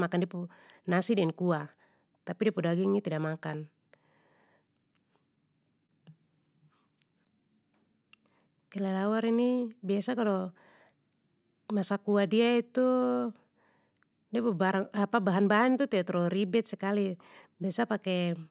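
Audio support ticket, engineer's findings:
Clock drift between sender and receiver, throughout. Sender clock runs roughly 2% slow against the receiver, so the jitter buffer keeps draining. Heard as an uneven, slightly dragging tempo across the whole call. Probable component: sender audio device clock versus receiver playout clock.

Repeated timing corrections, 0.39 to 18.46 s. Playout stretched to 98% speed by recurring small edits, all in the lengthening direction, unevenly spaced, adding around a third of a second overall. Symptom: faint hiccups and unsteady pacing. Component: jitter buffer time-stretching compensating the drift.

Short stall from a late packet, 5.87 to 5.91 s. Buffer ran empty, and the last sound was held 25 ms until the packet arrived, then playback resumed in place with nothing lost. Heard as a brief hold with slight buzz or dip. Delay grew 25 ms. Component: jitter buffer underrun. 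Narrowband content, nothing above 4 kHz, consistent with the G.711 call path.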